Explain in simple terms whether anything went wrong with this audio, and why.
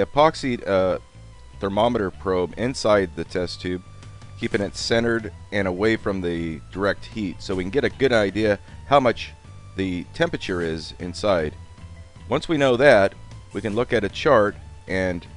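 Nothing went wrong with this recording; there are no dropouts, clicks, distortion or glitches to report at any point.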